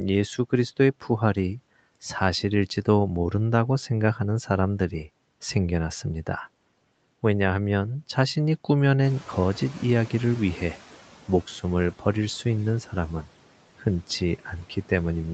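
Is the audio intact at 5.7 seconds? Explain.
Yes, the audio is intact at 5.7 seconds.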